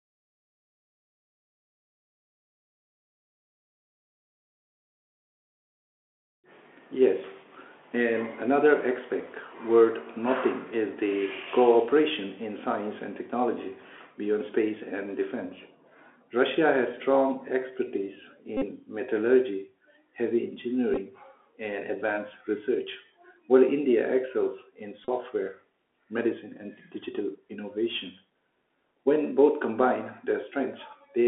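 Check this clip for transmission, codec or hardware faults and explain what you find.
Two faults are present: the whole recording has been carried over a Bluetooth CVSD headset codec, and three short stretches show Bluetooth headset packet repetition.

The Bluetooth CVSD headset codec affects the speech from start to finish, and the damage is plainly audible. CVSD sends one bit per sample, each bit only saying whether the waveform should step up or down, with the step size adapting as it goes. The sound fits a 64 kHz one-bit stream. The band sits between roughly 250 Hz and 3.4 kHz, so the speech is thin and lacks both low body and upper detail. Where the waveform moves faster than the step can follow, the sound distorts; sibilants come out scratchy, and a granular hiss runs underneath.

Bluetooth headset packet repetition occurs at 18.57 to 18.64 s, 20.94 to 20.97 s, and 25.05 to 25.09 s. 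When a voice packet fails to arrive, the chip decodes the previous packet's bits again. At 3.75 ms per packet, this repetition produces a buzz near 267 Hz. The first event loses about 45 ms, consistent with a dozen consecutive repeats, and buzzes steadily. The third, about 34 ms, is similar. The middle one is scattered across 30 ms, with runs of about 10 ms at most, so it sounds like brief rough ticks.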